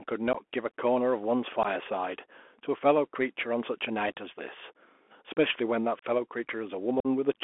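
From start to finish the speech sounds thin and boxed-in, with scratchy s sounds and a fine granular hiss beneath it. This is the Bluetooth CVSD headset codec. Its one-bit up-or-down coding fits a 64 kbps link, the band is limited to roughly 250 Hz to 3.4 kHz, and its adaptive step can't keep pace with sharp high sounds.

Four short holes break the speech, at 0.33 to 0.35 s, 1.63 to 1.66 s, 5.99 to 6.05 s and 7.00 to 7.07 s. Each has abrupt edges. This is unconcealed Bluetooth headset packet loss. Silence or an idle pattern replaced about 15 ms of lost audio at the first two gaps, 30 ms at the third and 45 ms at the last. That amounts to a couple of packets at the early gaps and several at the later ones.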